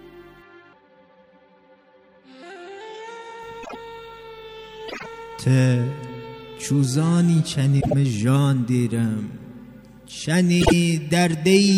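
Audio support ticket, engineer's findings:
Frames out of order, four events: 3.63–3.76 s, 4.88–5.06 s, 7.81–7.93 s, 10.60–10.73 s. Brief garbled flutter. Halves of each stretch play swapped, likely from frame reordering in the jitter buffer or depacketiser. Blocks are 26.1 ms, and 52.2 ms at 4.88 s, which fits single-frame and two-frame swaps. Unlike packet loss or dropouts, there is no gap or concealment smear and no time is lost; the material is all there, just in the wrong order.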